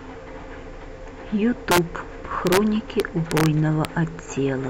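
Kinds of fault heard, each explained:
Integer overflow: the speech peaks push past the largest value the integer format can hold, and instead of stopping at the ceiling they wrap round to the opposite sign, so each overshoot snaps across the full range. You hear sharp, violent cracks on the loud moments, far nastier than clipping, at 1.71–1.78 s, 2.47–2.57 s, a longer stretch from 3.00 to 3.46 s, and a single crack at 3.85 s, even though the peaks only go about 1 to 2 dB over.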